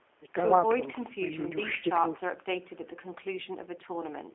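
Plainly audible G.729 codec damage runs throughout: speech rebuilt from a handful of pulses per frame sounds rough and synthetic, squeezed into 300 Hz to 3.4 kHz.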